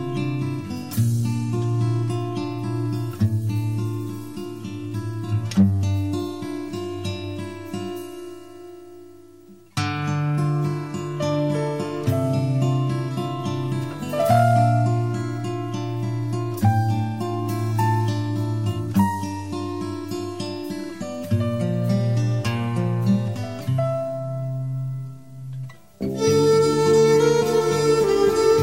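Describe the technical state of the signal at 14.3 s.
Hard clipping runs from 14.30 to 14.64 s. The signal overshoots the available range by about 4 dB, so its peaks are sheared flat, adding harsh crackle. The waveform shows squared-off tops, and the spectrogram shows a bright smear of harmonics reaching high frequencies.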